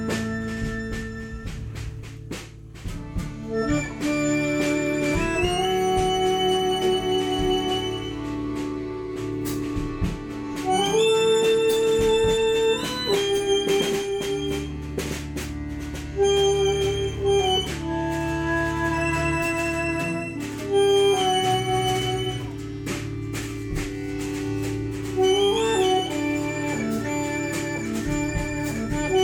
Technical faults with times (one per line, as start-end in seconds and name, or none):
8.94 dropped samples
11.83 dropped samples